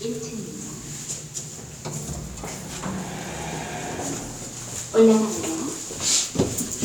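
No technical faults detected.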